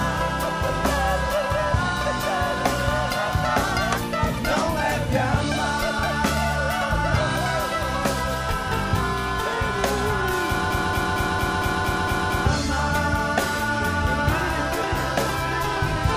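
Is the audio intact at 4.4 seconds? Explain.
Yes, the audio is intact at 4.4 seconds, with no fault at that moment.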